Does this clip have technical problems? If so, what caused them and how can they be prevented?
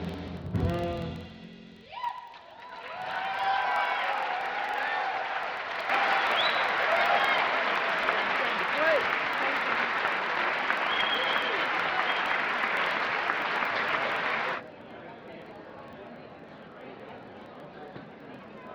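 Yes. A filter restarted on every block runs through the whole clip. Each block starts from silence, so a small transient opens it. These repeat at 21.5 Hz as a buzz that tracks the signal's level, which fits a 2048-sample block. Carrying filter state across block boundaries prevents it.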